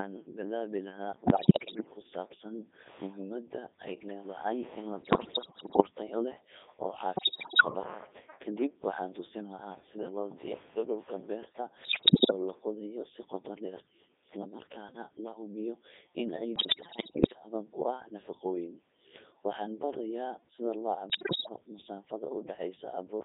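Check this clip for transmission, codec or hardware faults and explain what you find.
Two faults are audible. Throughout, the speech is robotic and buzzy within a narrow 300 Hz to 3.7 kHz band, the sound of heavy Codec 2 vocoder processing, which fits its 3.2 kbit/s mode. The decoder rebuilds speech from sine waves using only pitch, voicing, level and envelope, so the original waveform is discarded.

In six bursts the voice breaks into bleeps, warbles and sudden jumps in pitch and level. These are bit errors on digital voice radio. Roughly a tenth or more of the bits are flipped, corrupting the frame parameters that drive the synthesiser. The bursts fall at 1.26–1.91 s; at 5.02–5.82 s, between "ay leedahay in la" and "tayo leh oo"; at 7.16–7.65 s; at 11.84–12.32 s, between "loo diyaariyo dhulka beerta" and "la qodayo si qoto"; at 16.56–17.39 s; and at 21.10–21.56 s, right after "sida loo".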